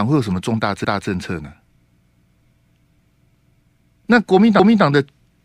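Overlapping chunks: each 1-second chunk restarts 250 ms early, so a quarter-second of speech repeats at 0.85–1.1, 2.1–2.35, 3.35–3.6 and 4.6–4.85 s, heard as regular stutters.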